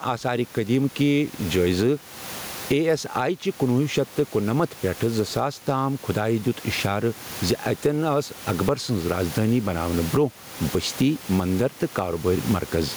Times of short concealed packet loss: none

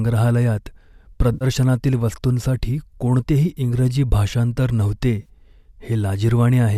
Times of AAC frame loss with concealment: 1.33-1.45, 5.21-5.29

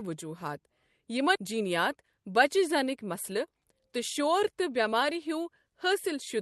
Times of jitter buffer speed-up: 1.53-4.27

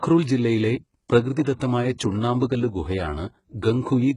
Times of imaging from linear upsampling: none

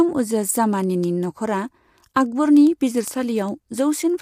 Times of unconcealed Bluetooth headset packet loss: none

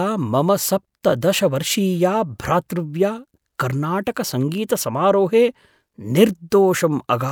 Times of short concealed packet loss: none

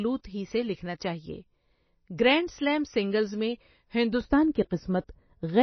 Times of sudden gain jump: none

